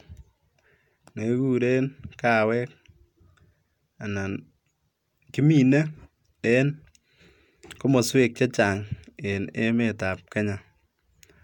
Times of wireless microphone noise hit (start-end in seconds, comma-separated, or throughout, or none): none